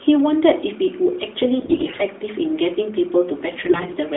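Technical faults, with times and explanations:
1.60–2.03 s and 3.64–3.97 s, AMR bit errors: the sound turns hoarse, scratchy and gargly while keeping its rough pitch and level. Flipped low-priority bits in a narrowband mobile stream, which fits 12.2 kbps AMR-NB, misplace the excitation pulses and skew the fine pitch, gain and spectral values. The first burst is heavier.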